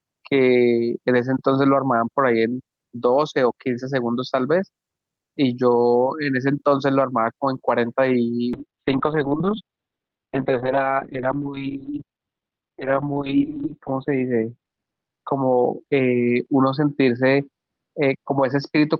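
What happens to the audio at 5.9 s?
At 5.9 s you're hearing gain pumping, which runs through the whole clip: the gain swings by around 10 dB, pulled down under each loud sound, likely from a fast limiter fighting too much gain.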